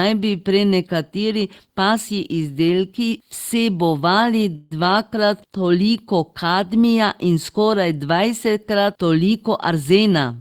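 Around 4.55 s, just after "prenekateri pasji izdelki vsebovali", packets were likely held up in transit and the jitter buffer ran empty. The result is a call audio freeze: the receiver extends the last sound as a fading buzz or hiss for 155 ms until 4.73 s, then resumes with "dvakrat toliko kadmija in". Nothing is lost, but a gap is inserted into the speech.

From 9.69 s to 10.38 s the jitter buffer held more audio than its target, and the receiver trimmed it back with a jitter buffer speed-up, cutting out short pitch-period slices repeatedly. About a tenth of a second is removed, so the speech runs at roughly 111% speed with its pitch unchanged and sounds hurried.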